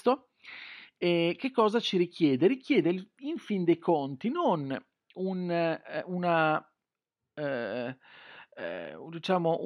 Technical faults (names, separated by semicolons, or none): none